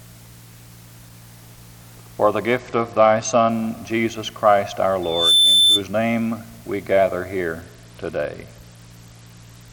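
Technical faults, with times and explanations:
2.58 to 3.50 s and 7.61 s to the end, Bluetooth SBC bit pool drop: the treble dulls and gets gritty as the upper sub-bands starve, which fits the bit pool falling from 31 to 10, around 77 kbps.
5.02 to 5.83 s, loudspeaker feedback squeal: a 3.5 kHz tone swells over about a third of a second to roughly 5 dB above the sound as the mic-speaker loop runs away.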